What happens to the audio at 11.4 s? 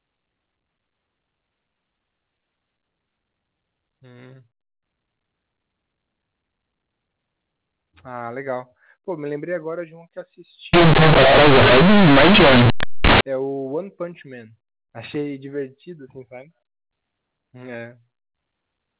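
At 11.4 s the speech falls inside a stretch of companded audio read as linear, running from 10.73 to 13.21 s. The telephone stream's A-law bytes are being played directly as ordinary 8-bit samples, never expanded from their logarithmic scale, so every sign change throws the output across roughly half its range. Soft and loud passages end up equally huge, and the sound turns into loud, harsh, buzzy distortion with heavy noise filling the pauses.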